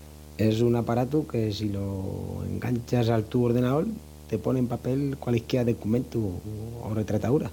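From start to finish there's video or display buzz: a screen or its cable is leaking into the audio path, giving a steady 75 Hz buzz with hash riding above it, sitting roughly 20 dB under the speech and never letting up.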